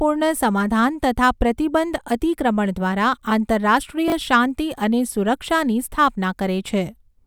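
Speech, with chunks out of order between 4.08 and 4.12 s, just before "શાંતિ અને સુરક્ષાની": one 20 ms chunk plays one slot late, swapping places with its neighbour. It sounds like a brief jumbled catch, and on a waveform or spectrogram it shows as three abrupt discontinuities with vertical broadband lines.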